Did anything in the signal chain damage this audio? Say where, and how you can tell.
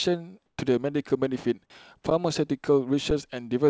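Yes. In call processing, the sender likely halted transmission and the receiver substituted comfort noise in place of the background. From 0.46 to 0.58 s, the detailed background, about 48 dB below peak, drops by about 19 dB into a steady, featureless hiss.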